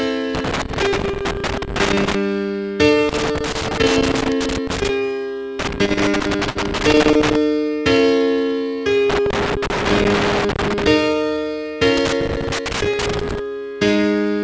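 Loose connector crackle appears in five bursts, at 0.35–2.15 s, 3.09–4.89 s, 5.59–7.36 s, 9.10–10.87 s and 11.97–13.39 s. A worn or dirty contact is making and breaking as it moves, chopping the signal, so each burst is heard as irregular crackle or scratching. On a waveform the sound is broken into spiky, gapped fragments. On a spectrogram, scattered thin vertical streaks run across the full band, which tops out at 8 kHz, consistent with a G.722 call codec.

Inside the third burst, at 6.50–6.57 s, there is a short stall from a late packet. A packet arrived late, the jitter buffer ran dry, and the receiver stretched the last sound by 54 ms before resuming from the same point. Nothing is lost, but that moment is held too long. On a spectrogram the spectral content freezes into a brief horizontal smear, and on a waveform a short stretch repeats.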